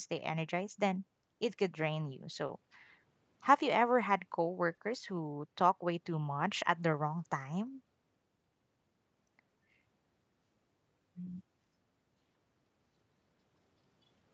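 At 2.47 s and 4.75 s, short stalls from late packets occur. The jitter buffer ran dry, so the speech holds for 20 ms, then 30 ms, with a faint buzz or dip.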